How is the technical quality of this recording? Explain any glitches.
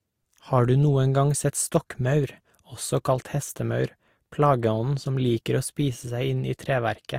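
The recording is degraded for its full length by a transcoding fault. Throughout the speech, nothing is present above 16.6 kHz, and two different kinds of coding artefact are heard layered together. This is likely transcoding between lossy codecs, pointing to a low-bitrate Opus encode later re-encoded as Vorbis. The second codec spends bits reproducing the first codec's artefacts and adds its own, while the lower band limit carries through.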